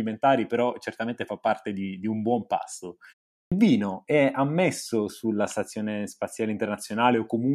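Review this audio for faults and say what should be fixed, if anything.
A clipped start after a pause hits at 3.41 s: after a 0.36 s gap, the output was still waking and swallowed the first 106 ms of speech. Keeping the device awake through short pauses would prevent it.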